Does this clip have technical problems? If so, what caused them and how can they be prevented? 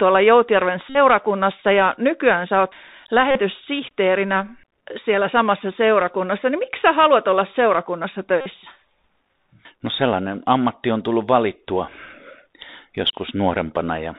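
Yes. The speech sounds dull and boxed-in, with nothing above 4 kHz, scratchy s sounds, and a fine granular hiss underneath. This comes from the Bluetooth CVSD headset codec, which codes each sample at 64 kHz as a single up-or-down step and cannot follow fast, loud high-frequency movement. To prevent it, record through a wired microphone or a headset using a wideband Bluetooth codec.

Three short, steady buzzes near 267 Hz come from Bluetooth headset packet repeats, each lasting roughly 50 ms. The first runs from 0.90 to 0.97 s. The second runs from 3.31 to 3.40 s, right after "ja nykyään sä oot". The third runs from 8.41 to 8.46 s, after "sä haluat olla seurakunnassa". Lost packets were replaced by replaying the previous one every 3.75 ms. To prevent it, keep the headset close to the phone and away from radio interference.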